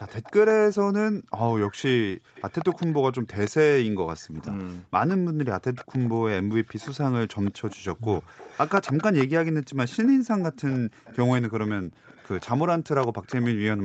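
Speech in which a call's echo canceller likely failed to remove loudspeaker sound picked up by its microphone, producing echo leak: a copy of the voice delayed by 174 ms and roughly 15 to 30 dB quieter, heard at 0.06–0.53, 2.35–3.51, 4.21–4.64, 5.75–6.09, 6.66–6.91 and 7.44–13.47 s. The same canceller also gated the background, pulling the microphone down so the room sound drops by about 40 dB for roughly 150 ms at 2.18–2.34 s.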